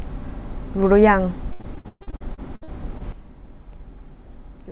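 From 1.52 to 3.02 s the speech turns choppy and robotic, with about a dozen holes, the longest about 120 ms. This is repeated packet loss: roughly a third of that stretch is stretched-out earlier sound filling in for missing audio.

At 3.12 s the level suddenly drops by about 12 dB, and the background noise drops with it, staying low to the end. That points to a sudden gain jump, likely a digital gain change applied in one step with no ramp, over the call's narrowband sound, which stops at 4 kHz.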